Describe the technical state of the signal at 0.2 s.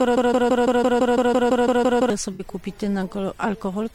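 A 0.17 s fragment repeats back to back, a broken-record loop already running when the clip opens and lasting until 2.10 s, likely from a stalled player resending its last buffer.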